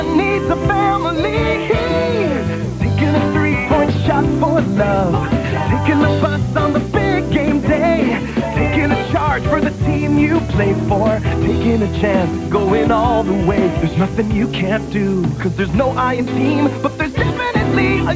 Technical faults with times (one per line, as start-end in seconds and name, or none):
none